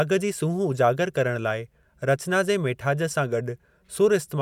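No faults can be heard anywhere in this speech recording.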